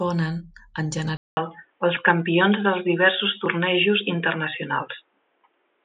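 A speech recording that, at 1.17 s, drops out for about 0.2 s and then returns duller and boxier through to the end, with nothing above 3.8 kHz, a modest change in level and a faint new background noise well below the speech. The likely cause is an input switched to a poorer device. On a spectrogram the energy above 3.8 kHz is sharply cut off after the gap, and the waveform shows a brief flat silence and a changed amplitude.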